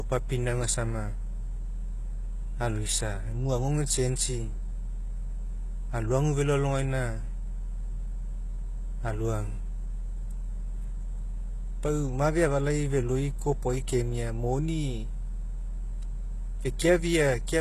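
From start to finish the speech carries the sound of HE-AAC compression, likely at a very low bitrate, consistent with roughly 16 kbps. Nothing is present above 12.3 kHz, and the treble below that cutoff sounds rebuilt rather than captured: upper bands have been copied up from the lower spectrum and shaped only coarsely, so their harmonics do not line up with the real ones. The damage is plainly audible, with s sounds turning gritty and metallic.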